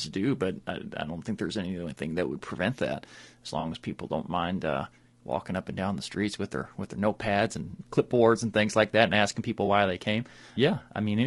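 Low-delay AAC compression, throughout: the speech sounds rough and grainy, with noise between the harmonics. This is likely from AAC-ELD's short frames at a bitrate suggesting about 32 kbps.

AAC frame loss with concealment occurs at 3.59–3.65 s (40 ms lost), 7.71–7.74 s and 9.65–9.68 s (20 ms each). The decoder rebuilds the missing audio from the last good spectrum, leaving brief smeared, noisy patches.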